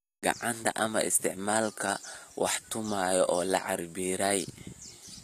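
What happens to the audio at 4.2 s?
HE-AAC compression is audible at 4.2 s, as it is for the whole of the speech clip. The likely cause is a low-bitrate encode, the damage fitting roughly 24 kbps. The codec keeps only the lower spectrum and fills the treble by copying lower bands upward under a coarse envelope, so the upper harmonics don't line up with the real ones. The top end stays bright but false, and s sounds come out gritty, metallic or lispy.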